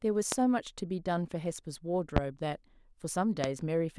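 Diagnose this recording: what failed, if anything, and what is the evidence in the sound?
Loud pops at 0.32–0.36, 2.17–2.20 and 3.44–3.47 s, single sharp transients about 20–25 dB over the speech; likely voltage spikes in the analogue wiring.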